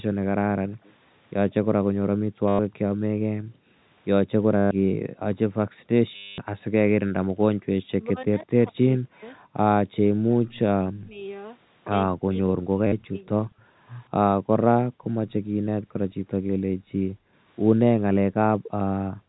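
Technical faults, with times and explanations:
0.12–0.78 s, 2.11–7.65 s, 13.63–16.79 s and 17.82–19.29 s: background gated by the echo canceller. While far-end audio played, the canceller cut the microphone hard. The room sound drops by up to about 40 dB, for roughly 0.7, 4, 2 and 1 s in total, then returns.
0.84–0.92 s and 12.2–13.55 s: echo leak. A faint delayed copy of the far-end speech comes back about 164 ms late, roughly 35 dB below the speech. It is likely leakage the far side's echo canceller failed to remove from its loudspeaker pickup.
2.48–2.59 s, 4.57–4.71 s, 6.16–6.38 s and 12.87–12.92 s: packet loss with last packet repeated. Gaps of 110, 140, 220 and 50 ms were filled by replaying the last packet. The run buzzes robotically, which fits 10 ms packets and a 100 Hz buzz.
7.72–13.35 s and 17.07–17.12 s: speech suppressed in double talk. The talker's speech dips or cuts out in pieces, by up to about 40 dB over roughly 3 s, then about 10 dB briefly. 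Both sides likely spoke at once, confusing the canceller.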